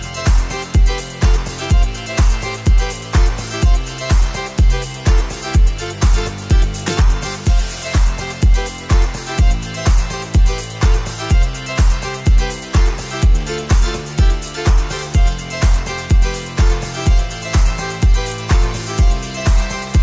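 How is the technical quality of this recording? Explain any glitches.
No glitches or technical faults can be heard anywhere in the recording, and the signal stays continuous and stable throughout.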